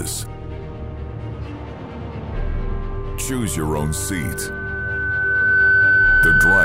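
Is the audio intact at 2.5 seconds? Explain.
Yes, the audio is intact at 2.5 seconds, with no dropout, click, distortion or other fault audible at that moment.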